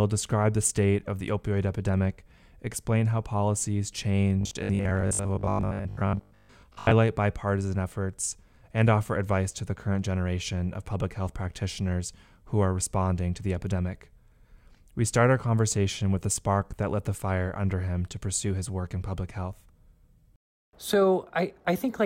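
Speech, with one stretch of robotic sound from repeated short buffers. It runs from 4.41 to 6.91 s, after "epidemic explain how policies" and before "bipartisan efforts and offer". The voice turns into a rigid, metallic buzz locked at 50 Hz, following the original speech only roughly. About half the audio there seems to be repeats. The likely cause is audio arriving too slowly, so playback loops a 20 ms chunk and skips real audio.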